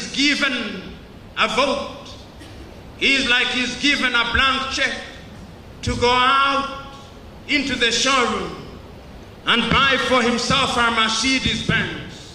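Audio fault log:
No fault is heard in this audio.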